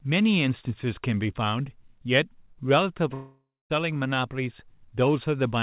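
At 3.14 s the speech breaks off for about 0.58 s. A fading buzz continues the last sound, then silence, until audio resumes at 3.72 s, likely a long network dropout.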